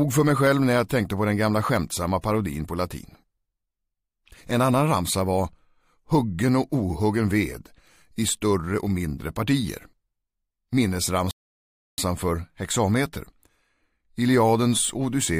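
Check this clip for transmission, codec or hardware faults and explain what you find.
One transmission fault shows up: a rebuffering stall from 11.31 to 11.98 s. The player exhausted its downloaded audio and halted until more data arrived, so the sound drops to silence for 0.67 s, then resumes exactly where it stopped, losing nothing but running that much longer.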